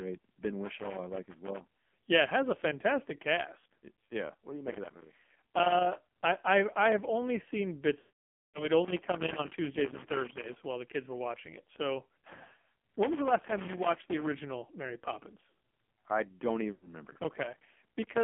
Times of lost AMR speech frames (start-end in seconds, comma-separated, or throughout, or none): 8.00-8.68, 16.72-16.89